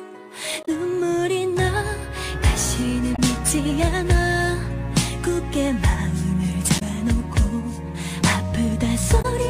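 Damaged data in a compressed stream corrupts four short stretches, so the decoder misreads those frames and loses sync until it finds a valid header. Each brief glitch lasts about 70 ms, at 0.62–0.69, 3.12–3.19, 6.75–6.82 and 9.18–9.25 s.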